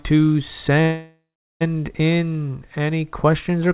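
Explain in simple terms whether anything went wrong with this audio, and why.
A call audio freeze runs from 0.82 to 1.63 s. The sound stalls and is stretched into a fading buzz for about 0.8 s, the last 0.39 s silent, then resumes with "in any". The likely cause is delayed network packets emptying the receiver's buffer, so a gap was inserted but nothing was lost.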